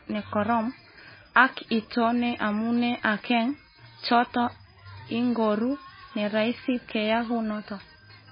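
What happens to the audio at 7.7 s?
Likely MP3 compression at a starved bitrate, near 17 kbps, throughout the clip including 7.7 s, cutting everything above 5 kHz and making the speech watery and swirly.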